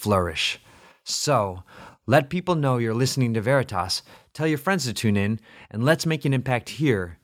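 Listening through this speech recording, nothing stood out as a technical fault at any point.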